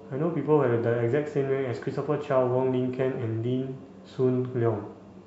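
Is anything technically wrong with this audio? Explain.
No, nothing is technically wrong with this audio.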